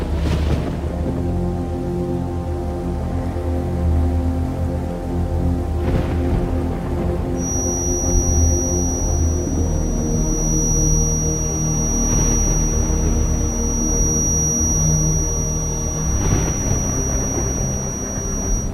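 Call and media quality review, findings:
Thin steady whistle near 5.8 kHz from 7.33 s to end, a few dB under the signal, swelling and fading slowly; likely feedback whistle, speaker-to-mic loop held just at the point of ringing.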